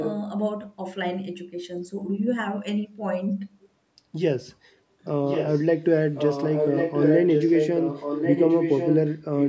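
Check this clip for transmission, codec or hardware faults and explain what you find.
One fault is present: echo leak. A delayed copy of the speech returns about 1.1 s late, at 0 to 0.21 s (about 10 dB down), then 5.26 to 5.82 s, 6.15 to 9.16 s, and 9.37 s to the end (about 5 dB down). The likely cause is a far-end loudspeaker whose echo canceller passed its microphone pickup back. A spectrogram shows duplicate speech patterns shifted 1.1 s, and the waveform shows overlapping lower bursts.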